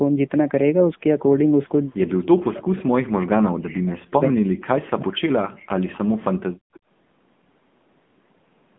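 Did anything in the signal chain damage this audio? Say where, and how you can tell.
Yes. The AMR narrowband mobile codec, at the codec stage, shapes the whole clip. The speech sits in a 150 Hz to 3.5 kHz line band with nothing above 3.6 kHz, and the voice has a buzzy, synthetic edge that points to a low AMR-NB mode near 8 kbps.

Speech suppressed in double talk, from 2.09 to 3.98 s, is a call-processing fault. For roughly two seconds the voice sinks very deeply. This is likely an echo canceller turning down its own talker while both sides spoke at once.

Background gated by the echo canceller, from 6.58 to 6.72 s, is also at the call-processing stage. The room sound drops by about 34 dB for a brief moment, then returns as the canceller releases the microphone it clamped while the loudspeaker played.

An echo leak follows from 6.73 to 6.80 s. A very faint copy of the voice, far below the direct speech and delayed 159 ms, slips through, likely from a loudspeaker-side echo canceller that failed to remove everything its microphone picked up.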